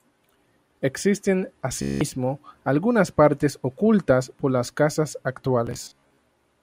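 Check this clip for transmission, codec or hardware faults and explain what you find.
Two Bluetooth stutter events affect this speech, at 1.82–2.01 s and 5.67–6.22 s. Late or lost packets made the receiver replay its last short slice, giving a buzzing, machine-gun repeat. About 190 ms is lost first; the second scatters about 290 ms across 0.55 s.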